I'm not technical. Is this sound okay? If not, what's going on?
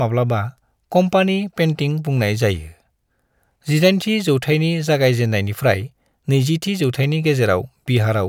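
Yes, I can't hear any faults in this recording.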